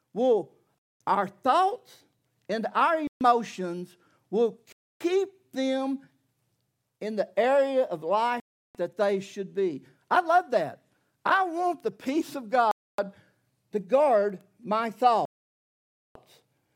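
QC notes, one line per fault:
0.78–1.00 s, 3.07–3.21 s, 4.72–5.01 s, 8.40–8.75 s, 12.71–12.99 s, 15.25–16.16 s: Bluetooth stall. Speech cuts to dead silence for 0.14 to 0.9 s, then resumes. It stops before "our thoughts and our", between "in the area of" and "that they should be", and after "to guard my". Likely cause: interference delayed packets, so the headphone buffer emptied until resends arrived.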